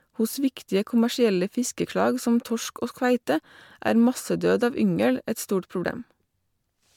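The speech has likely been through repeated lossy MP3 coding, about five passes, with a level that fits a 128 kbit/s chain. This generation loss leaves the whole clip swirly, hollow and smeared, blurs consonant attacks, and removes everything above 19.9 kHz.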